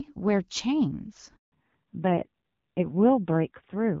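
A handover gap at 1.36 to 1.52 s: speech cuts off abruptly and stays silent for 160 ms while the call switches networks. Fallback to narrowband follows from 1.52 s onward: nothing above 4 kHz remains and speech turns dull and rough, which points to low-rate narrowband AMR replacing HD Voice.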